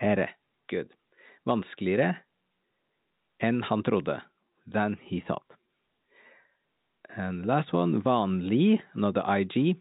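No faults found in the speech, which carries the expected G.711 telephone character: nothing above 4 kHz, with only faint quantisation noise riding under the signal.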